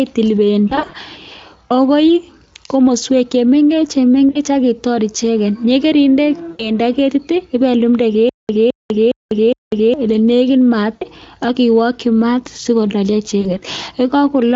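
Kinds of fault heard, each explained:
VoIP packet loss concealed by the speech codec: The sound briefly smears into a buzzy, stretched tone that fades, then takes a moment to recover, at 0.69–0.95 s, 4.29–4.38 s, around 6.51–6.72 s between "ak itor icheket yekeinde" and "keti ipelumde", just before "ak iwoki maat sikololyo" near 10.95 s, and after it at 13.41 s. Missing packets, up to 140 ms in the first burst, forced the Speex decoder to extrapolate its last pitch and filter while lowering gain.
Stutter with silent gaps: From 8.29 to 9.94 s, a fragment about 213 ms long is heard again four times at an even 411 ms pace, each repeat followed by roughly 198 ms of dead digital silence, and the audio meant for that stretch never plays. This is most likely a stalled stream or player that replayed its last buffered piece on each retry and then ran empty before the next attempt.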